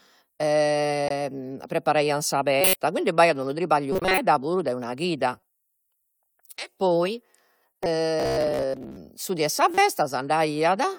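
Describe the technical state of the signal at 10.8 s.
The speech at 10.8 s, near the very end of the clip, comes through intact, with no dropout, click, distortion or other fault audible at that point.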